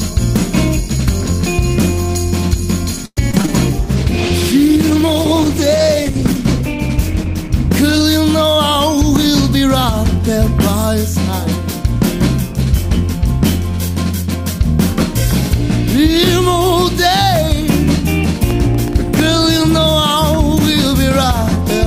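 Between 3.05 and 3.50 s the sound turns choppy, with pieces missing: repeated packet loss, where four gaps in quick succession are patched by stretching the last sound.

From 3.79 to 8.10 s the audio becomes rough, watery and muffled, with the top end gone. This is a call bitrate drop, and the coarse coding fits a fall from about 128 kbps to around 14 kbps.

At 8.47 to 9.65 s the audio runs very slightly faster at unchanged pitch, about 2% fast. At 13.89 to 14.59 s it is more noticeably rushed, about 7% fast. Both are a jitter buffer speed-up, trimming short pitch-period slices to shed a few tens of milliseconds of delay.

From 18.50 to 19.20 s a gritty crackle rides on the sound: processor overload crackle. About ten very short buffers missed their deadlines in a row, each replaced by old audio with hard edges.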